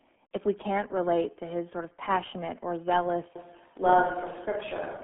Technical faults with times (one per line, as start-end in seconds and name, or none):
0.00-5.03 RealAudio 14.4 codec
3.36-5.03 switch to a distant microphone